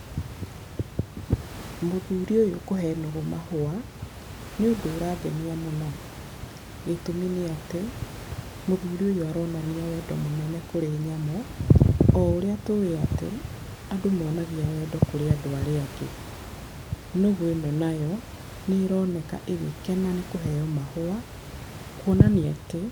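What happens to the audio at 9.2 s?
At 9.2 s the speech carries on intact, with only the room noise about 15 dB below it in the background.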